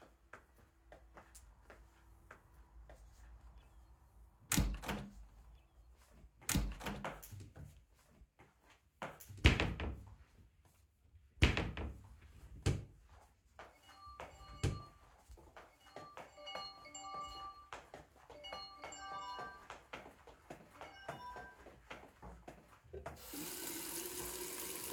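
A doubled audio track runs through the whole clip: every event is heard a second time roughly two seconds later, at about the same loudness as the first. The repeat carries the full frequency range with no decay or added room colour, so it reads as a second, unaltered copy rather than an echo. The likely cause is the same sound being captured again through a slower path and mixed back in out of step.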